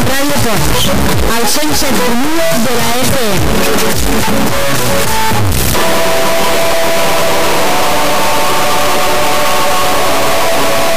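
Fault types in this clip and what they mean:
Stuck bit: throughout, harsh buzzy distortion, and quiet moments fill with loud noise, likely from one high-order bit held fixed, with errors of about -5 dBFS.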